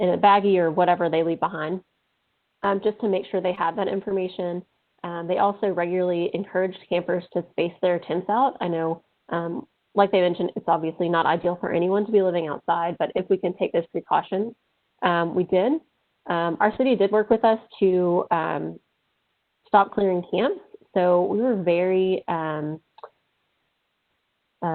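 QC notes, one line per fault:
3.55–3.59 s, short concealed packet loss: about 20 ms of audio never made it to the decoder in time, so the receiver patched roughly 15 ms of the gap by carrying the preceding sound forward and then crossfading back into the real signal. You hear it as a quick smear or tiny wobble rather than a clean dropout, because the hole was filled with a guess instead of left silent.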